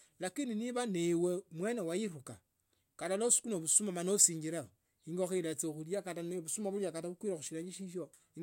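No technical faults occur at any point in the speech.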